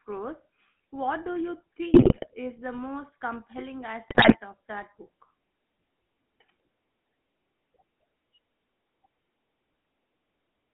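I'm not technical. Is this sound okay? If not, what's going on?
No. The GSM full-rate codec colours the whole clip: this early mobile-phone speech coder rebuilds the voice from a simple model driven by a regular pulse train, so speech sounds buzzy and gravelly, and everything above about 3.4 kHz is gone, leaving a narrow, muffled phone-line tone.

GSM bit errors strike at 1.94 to 2.28 s, between "do you" and "is the most compelling", and again at 4.08 to 4.38 s, between "is the most compelling" and "of that book". Corrupted data reached the decoder there, so the voice breaks up into squawks, pops and gargling for a fraction of a second each time.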